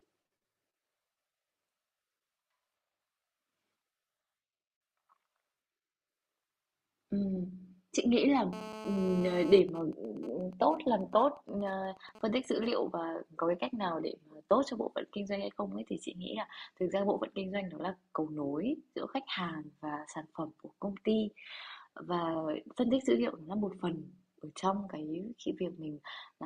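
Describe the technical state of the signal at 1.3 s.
At 1.3 s the speech signal is intact, with no audible dropout, distortion, clipping or other fault at that moment.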